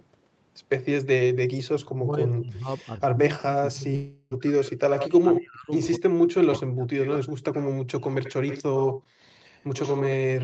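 From 1.8 to 4.8 s the speech sinks, by about 30 dB at its deepest, for roughly two seconds in pieces. This is likely speech suppressed in double talk: the echo canceller turned the talker down along with the far side. Unlike a dropout, the speech thins and dips but keeps flowing.

Inside that stretch, from 3.95 to 4.34 s, a long network dropout likely left about 360 ms missing. The last sound is stretched into a fading buzz rather than going silent, and speech resumes further on without the lost portion.

From 5.24 to 7.23 s suppression in double talk likely hits again, dipping about 40 dB over roughly 1.5 s.

A delayed copy trailing the voice by 80 ms is likely an echo leak, at 4.61 to 5.41, 5.83 to 6.00, 7.02 to 7.70, 8.03 to 9.02 and 9.54 to 10.15 s, about 5 to 15 dB below the speech. The fixed short lag separates it from reverberation.

From 9.02 to 9.19 s the room sound drops about 40 dB for roughly 150 ms, then returns. 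This is background gated by the echo canceller, where only the ambience, not the speech, is cut.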